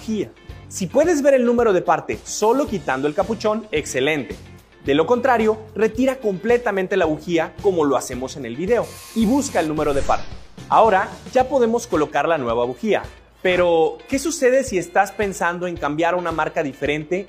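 No technical faults can be heard anywhere in this audio.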